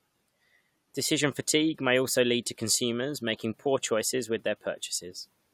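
No technical faults are audible.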